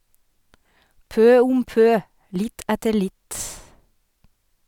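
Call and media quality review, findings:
No audible faults found in this speech recording.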